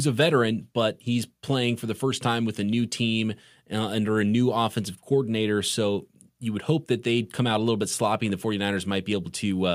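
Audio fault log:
No fault turns up anywhere in the speech, so the log has nothing to record.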